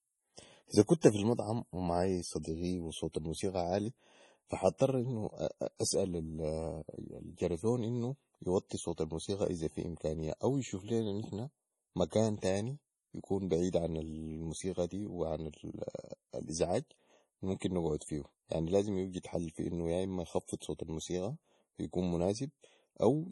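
From start to finish the speech sounds watery and swirly, with nothing above 11.4 kHz. This is likely heavy MP3 compression at a bitrate around 32 kbps: starved of bits, the encoder cut the treble and dropped weak frequency lines that flicker frame to frame.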